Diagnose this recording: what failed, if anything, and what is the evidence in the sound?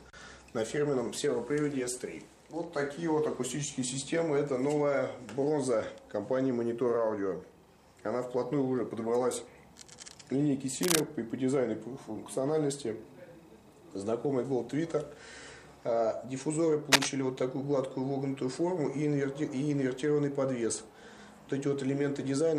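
Cable scratch noise, from the analogue wiring stage: brief bursts of dense, uneven scratching at 10.82 to 11.02 s, roughly level with the signal, and at 16.92 to 17.09 s, somewhat louder. The likely cause is a worn cable or connector whose contact resistance fluctuated as it moved.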